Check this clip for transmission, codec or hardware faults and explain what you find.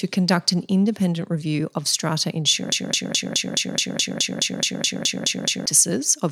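There is one fault, a broken-record loop. From 2.72 to 5.66 s, after "independent review of strata", a 0.21 s fragment repeats 14 times. A stalled stream likely kept resending it. The audio meant for that span is lost.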